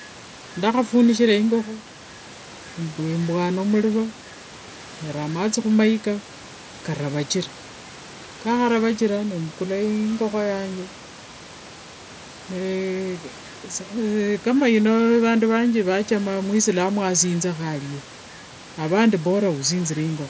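No technical faults can be heard in this recording.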